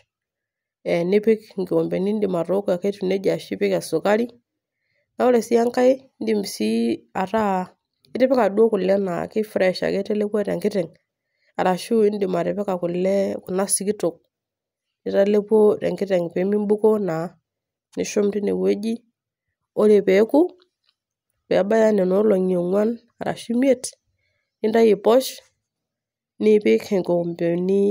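Listening closely to the speech, nothing stood out as a technical problem at any point in the recording.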